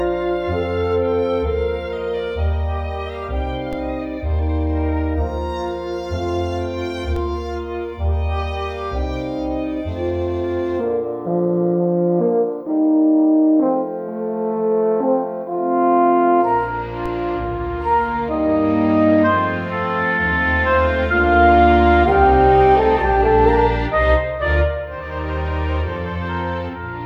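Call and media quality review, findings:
DC step, three events: 3.73 s, 7.16 s, 17.06 s. Low thump at each, sound continues unchanged. Baseline offset jumps about -17, -17, then -19 dBFS, decaying through a 20 Hz high-pass. Probable converter recalibration or offset input switching in.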